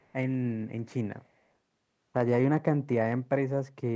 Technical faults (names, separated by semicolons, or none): echo leak